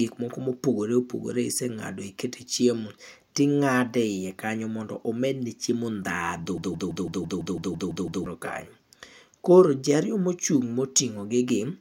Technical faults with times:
6.58-8.26 broken-record loop

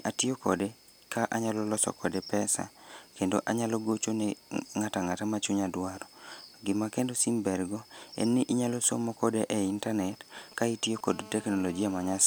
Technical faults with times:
9.43-11.09 GSM signalling bursts
11.11-12.22 GSM phone buzz

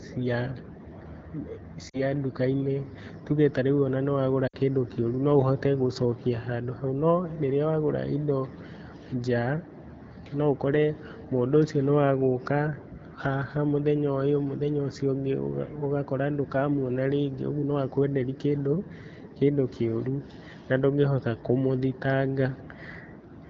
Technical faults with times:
1.89-2.01 lost AMR speech frames
4.47-4.56 lost AMR speech frames

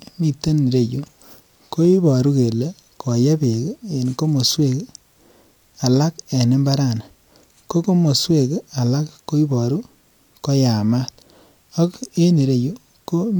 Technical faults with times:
none

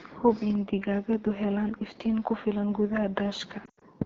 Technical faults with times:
0.00-4.05 AMR wideband (HD Voice) codec
3.65-3.84 lost AMR speech frames

